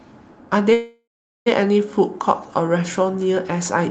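A call audio freeze runs from 0.73 to 1.48 s in this speech clip. The sound stalls and the last fragment is stretched into a fading buzz that drops to silence for about 0.42 s of the 0.73 s gap. Speech then resumes where it left off with nothing lost, so everything after it arrives about 0.73 s late. That points to packets held up in transit, likely emptying the jitter buffer. The call codec's roughly 8 kHz audio band is audible throughout.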